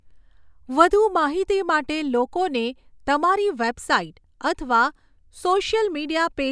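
A short stretch of speech with nothing technically wrong to point to, so there are no faults, times or causes to report here.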